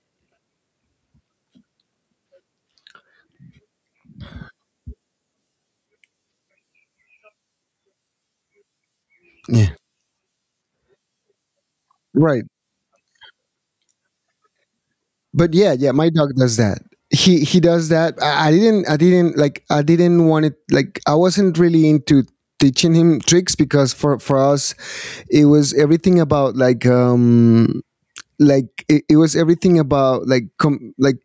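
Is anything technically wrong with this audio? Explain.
Yes, there's gain pumping running through the whole clip. The gain swings by around 15 dB, likely from input gain set way too high with a fast limiter clamping down. Everything sounds squashed. The call-style microphone processing, with nothing above 8 kHz, isn't a fault.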